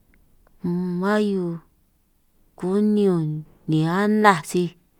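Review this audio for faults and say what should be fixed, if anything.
Nothing to fix: no faults turned up anywhere in the speech recording.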